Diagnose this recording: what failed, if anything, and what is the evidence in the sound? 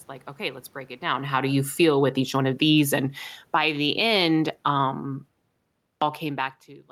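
Automatic gain falling, in call processing: from 1.28 to 3.72 s the level sinks by about 14 dB, background and all, then again by about 3 dB from 4.46 to 5.70 s. The waveform envelope tapers steadily, and the spectrogram dims uniformly across frequencies as the gain control pulls back.

Automatic gain rising, also in call processing: the level swells by about 4 dB between 1.90 and 2.41 s, and by about 6 dB from 3.63 to 4.49 s. The waveform envelope widens gradually, and the noise floor on the spectrogram brightens along with the sound, unlike the talker movement near 1 s.

Clipped start after a pause, at the playback device: after a 0.59 s pause, sound resumes abruptly at 6.02 s, with about 0.21 s missing from 5.81 s on. The waveform jumps from flat straight into the sound with no onset, and the spectrogram starts mid-sound. The output device was still waking.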